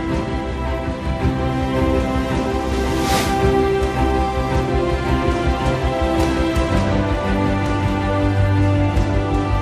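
No technical faults are audible anywhere in the clip.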